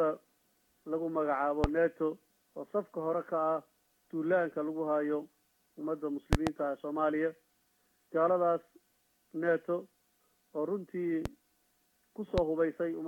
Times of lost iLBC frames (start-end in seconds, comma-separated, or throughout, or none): none